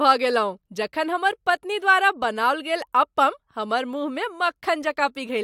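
No technical faults can be heard anywhere in the speech. There is nothing to point to at any moment in the recording.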